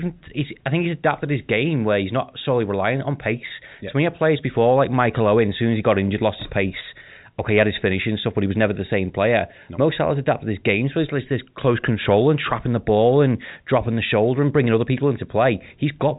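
Speech with no technical faults to report.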